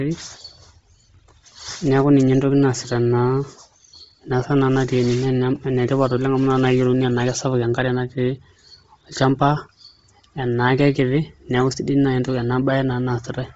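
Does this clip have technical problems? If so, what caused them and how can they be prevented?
Yes. Bluetooth LC3 compression affects the whole speech clip. Nothing survives above 7.8 kHz, and the upper band carries a breathy, grainy edge where heavy coding has replaced lost detail with filled-in noise. This likely comes from LC3 running at a low bitrate, and the damage fits about 24 kbps with 7.5 ms frames. To prevent it, record over a wired connection or set the Bluetooth LE Audio link to a higher LC3 bitrate and sample rate.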